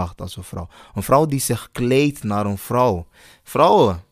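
At 1.88 s, between "vrouw die zich" and "naar een", a single sharp click cuts into the speech, the sign of dropped samples. Likely a handful of samples went missing, well under a millisecond, so the waveform jumps to a later value and leaves a thin vertical line across the spectrum.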